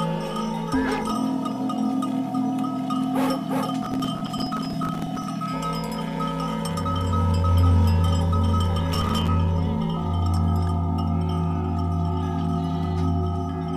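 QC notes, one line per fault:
3.83–5.28 s and 8.93–9.28 s: processor overload crackle. The audio path repeatedly missed buffer deadlines, and each late buffer of a few milliseconds dropped to silence. The hard-edged gaps cluster into a gritty tearing that stops when the load clears.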